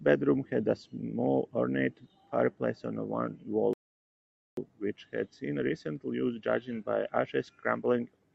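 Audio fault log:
3.73–4.57 s, rebuffering stall: the speech cuts to silence for 0.84 s, then picks up exactly where it stopped, because the player ran dry of downloaded audio and waited for more.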